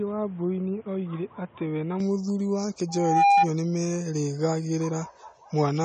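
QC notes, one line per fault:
Throughout, AAC compression: the speech sounds dull and smeared, with a warbling, fizzy edge on sibilants and held sounds. Nothing remains above 9 kHz. The likely cause is AAC-LC coding at a low rate, which fits around 32 kbps. At that rate the encoder lowers its cut-off and leaves gaps in the spectrum. The damage is plainly audible. Consonants lose their crispness and the top end sounds hollow.
0.00 to 2.00 s, input switched to a poorer device: the opening two seconds are narrow and boxy. Nothing remains above 3.8 kHz. The level sits about 5 dB lower, and a background noise lies about 30 dB under the speech. At 2.00 s the sound clears up at once, with no gap. The likely cause is the input running from a poorer microphone or headset call profile before switching back.
2.88 to 3.49 s, loudspeaker feedback squeal: a steady 805 Hz tone swells up over roughly 0.4 s and peaks about 10 dB above the speech. 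A microphone is picking up the loudspeaker it feeds. At 805 Hz the loop gain exceeds one, so that tone grows on itself. It stops at 3.49 s, as if the loop were broken.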